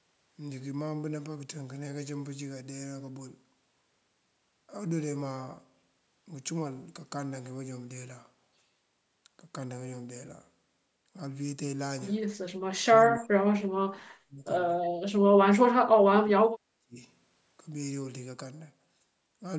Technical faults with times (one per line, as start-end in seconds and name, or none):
12.82-14.50 speech suppressed in double talk
15.79-16.97 speech suppressed in double talk